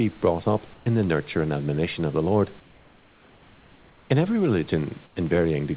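From 0.74 to 0.86 s, the likely cause is discontinuous transmission: a brief pause in the speech is filled with comfort noise, a steady, featureless hiss about 2 dB quieter than the real room background. The same substitution returns from 2.6 to 4.1 s, about 4 dB down, and again from 5.06 to 5.16 s, about 8 dB down.

From 4.29 s to the end, one channel runs slightly late, roughly a one-sample offset, before the mix to mono. This channel delay causes comb filtering, with a first notch near 20 kHz, far above the call's 4 kHz ceiling, so it only dulls the top of the sound slightly.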